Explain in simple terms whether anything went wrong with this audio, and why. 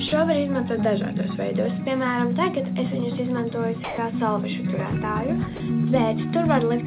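Three short gaps where the sound briefly gives way to a soft, steady hiss: at 0.08 to 0.12 s, at 3.84 to 3.98 s, and at 5.56 to 5.60 s. The middle one, about 140 ms, is the longest. This is likely sound dropped by the voice detector: the sender mistook those moments for background, stopped transmitting, and the receiver filled in comfort noise until the sound picked up again. The call path also cuts everything above 4 kHz.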